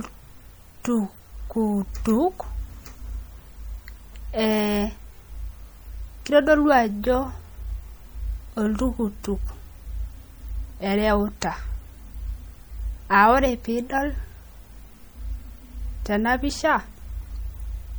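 From start to finish the speech carries plainly audible damage of the kind MP3 compression leaves, likely from encoding at a low rate, which fits roughly 64 kbps. Short of bits, the encoder chops the top of the spectrum and drops quiet frequency lines that flicker in and out between frames, so the sound turns watery and swirly, s sounds chirp metallically and consonant attacks smear. A plain low-pass filter would dull the highs without that shifting, bubbling texture.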